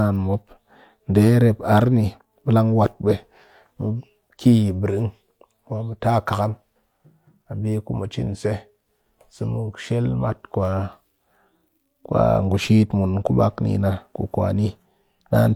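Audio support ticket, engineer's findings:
No faults found in this recording.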